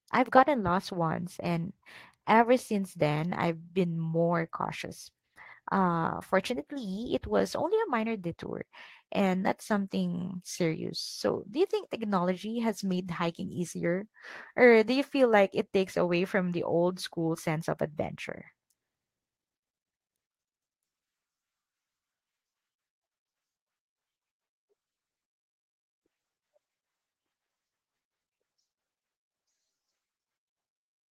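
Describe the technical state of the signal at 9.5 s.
At 9.5 s the speech is intact, with no dropout, distortion, glitch or other fault audible at that point.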